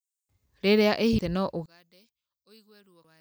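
Damaged data in a compressed stream at 1.19 s: a stretch of the encoded speech is corrupt, so the decoder misreads the affected frame, loses sync and hunts for the next valid header. The result is a brief glitch in the sound.

One channel inverted, likely, from 1.66 s to the end: the speech suddenly drops by about 34 dB. This fits one stereo channel having reversed polarity, so the centred voice and background cancel when both channels are summed to mono, leaving only their faint difference.

Damaged data in a compressed stream again at 3.04 s: another corrupted frame forces the decoder to resynchronise, producing a second short glitch within the already weakened signal.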